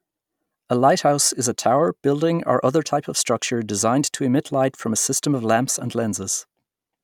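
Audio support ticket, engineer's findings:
No fault found on listening; speech path reproduces without audible defect, nothing to attribute to any component.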